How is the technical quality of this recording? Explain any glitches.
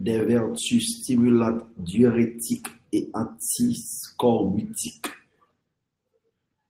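No glitches can be heard.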